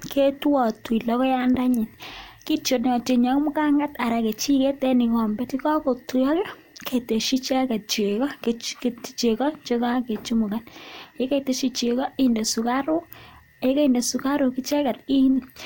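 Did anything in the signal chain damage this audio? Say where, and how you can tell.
Yes. A single loud pop sits at 1.55 to 1.58 s, peaking a few decibels above the speech, which carries on underneath it. The sharp, brief pulse points to an electrical transient, likely a plug, switch or static discharge in the analogue wiring, that the downstream circuitry shaped into a thump.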